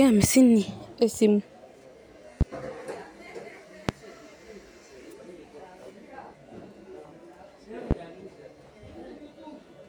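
Speech interrupted by three loud pops, at 2.41–2.44 s, 3.89–3.92 s and 7.91–7.94 s, each a sharp single thump rising roughly 15 to 20 dB above the signal, with the talking continuing underneath. They are likely voltage pulses from a plug, switch, static or driver glitch.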